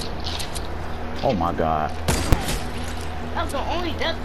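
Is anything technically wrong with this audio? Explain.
Yes. At 2.33 s there are invalid numbers at full scale: a calculation produced infinite or invalid values that pinned the output to one extreme value for about 5 ms. It is heard as a single loud bang. The waveform shows a flat slab far from zero, beyond the audio's peaks, and the spectrogram shows a bright broadband vertical line.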